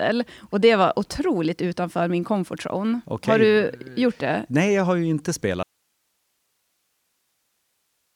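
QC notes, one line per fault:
5.63 s to the end, audio dropout to a faint residue: the speech cuts off abruptly right after "jag har ju inte" and never returns. Only a thin bed of hiss remains, roughly 50 dB below the speech level. The break is sudden, with no fade or natural pause leading into it. The likely cause is a loss of the wanted signal upstream while the path after the break stayed live, so its own noise floor carries on through the gap.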